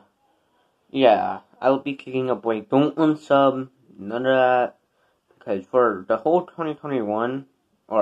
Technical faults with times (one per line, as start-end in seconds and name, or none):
none